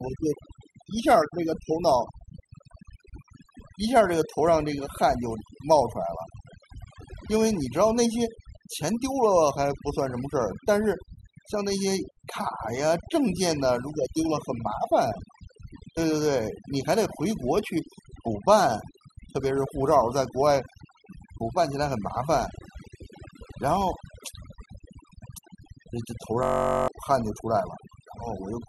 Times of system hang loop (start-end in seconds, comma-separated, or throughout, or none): 26.43-26.88